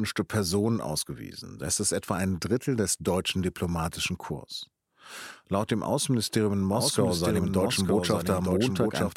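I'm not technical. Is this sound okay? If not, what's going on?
No. From about 6.72 seconds to the end of the speech, the recording likely picks up the same audio a second time through a slower route, so a doubled audio track results. A second copy of the speech plays along roughly a second behind the first, a bit quieter but just as clear, with no echo-like fading. It begins abruptly.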